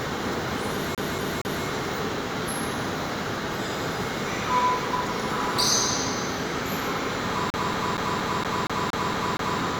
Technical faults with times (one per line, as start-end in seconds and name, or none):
0.95-1.65 CD stuck on one turn
7.50-9.60 CD stuck on one turn